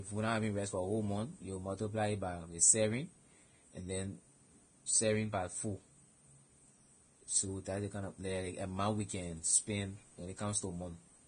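Vorbis compression runs throughout this speech clip: nothing is heard above 9.7 kHz, and the remaining treble is hissy and grainy, with roughened tones and smeared attacks. The likely cause is a low-bitrate Vorbis encode, perhaps around 24 kbps, whose coarse quantisation of the residue turned fine high-frequency detail into noise.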